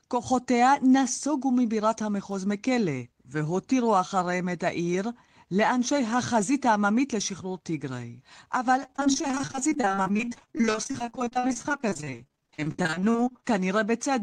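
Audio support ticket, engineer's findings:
Choppy, robotic speech from 8.83 to 13.48 s. Repeated packet loss (robotic sound) in the network path: about a hundred short gaps, none over 40 ms. Each gap is patched by extending the preceding sound, so roughly 42% of the stretch is concealment.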